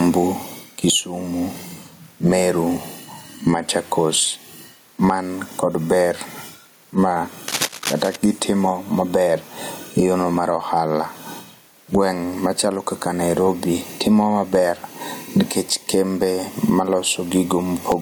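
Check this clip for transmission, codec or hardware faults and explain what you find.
Two hardware faults stand out in this speech recording: gain pumping throughout and a burst of cable scratch noise near the middle.

Gain pumping runs through the whole clip. The input gain is likely set far too high, with a fast limiter clamping it on every loud syllable. The gain swings by around 20 dB, and the speech sounds flattened and squashed.

Cable scratch noise appears from 7.48 to 8.16 s. Here a worn cable, connector or control was likely moved, making its contact resistance jump erratically. The result is a dense, irregular rasp of scratching and rustling over the speech, only a few dB below it. Its crackle is ragged and uneven, not the steady hiss of broadband noise or the isolated ticks of digital clicks, and it stops as soon as the contact settles.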